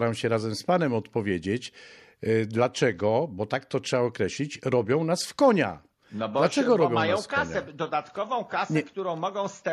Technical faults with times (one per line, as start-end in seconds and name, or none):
none